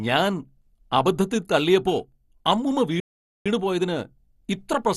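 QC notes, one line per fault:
Throughout: MP2 compression, likely the cause of the dull, gurgling quality in this speech. The sound fits a low rate around 64 kbps, where the encoder runs short of bits, shuts off upper sub-bands and quantises the remaining ones coarsely. Bands switching on and off give a granular, watery texture. That sets it apart from a plain low-pass filter, which dulls the sound without the churning distortion.
3.00–3.46 s: playback stall. The speech stops mid-flow and the output stays completely silent for about 455 ms before carrying on. This is likely the player running out of data or having its thread blocked, and then resuming once it recovers. What separates it from a dropout or packet loss is the length of the gap.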